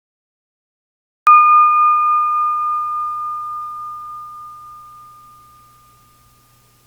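For the first 1.27 seconds there's just digital silence, and then the sound comes in abruptly, already mid-way through. That's a cut-off start: capture began late, so there's no natural attack or fade-in, just a hard entry at 1.27 s.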